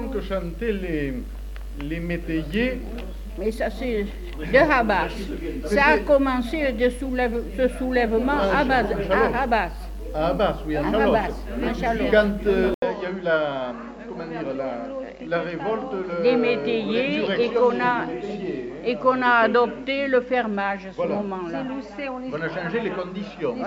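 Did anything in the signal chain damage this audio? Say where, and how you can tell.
Yes. At 12.74 s the sound cuts out for 80 ms, then runs duller and about 5 dB quieter to the end, with nothing above 7.6 kHz and faint new background noise. That is likely an input switched to a poorer device at the driver stage.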